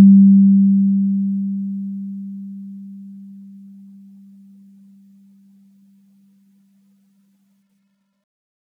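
No technical faults are audible.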